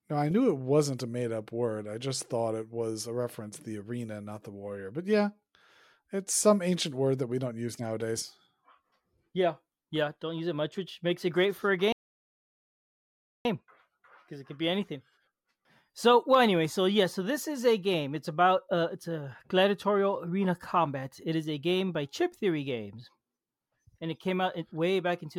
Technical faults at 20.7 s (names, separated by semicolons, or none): none